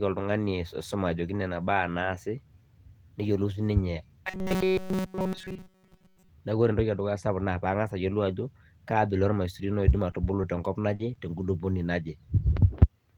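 From 4.27 to 6.29 s the speech turns into robotic sound from repeated short buffers. It becomes a rigid, metallic buzz pinned near 188 Hz. It follows the original speech only roughly. The likely cause is audio arriving too seldom. Playback fills each wait by looping a tiny slice, about 5.3 ms long. Nearly all of this stretch is that repeated slice, so the real speech underneath is skipped.

From 10.11 to 11.39 s there are scattered short gaps. A few small pieces of audio went missing, about three in all, the longest around 40 ms. Each hole was patched by stretching the sound just before it. Around 80 ms was lost and about 120 ms was rebuilt. The speech stays clear here. Brief hiccups and smeared ticks break in at those points.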